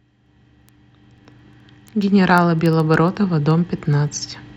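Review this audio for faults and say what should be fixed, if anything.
Word clock ticks run through the speech from 0.12 s to 4.56 s, about every 0.07 s: an unlocked receiver slips one sample per tick. The metronomic spacing distinguishes them from random clicks. Lock the receiving device to the sender's clock.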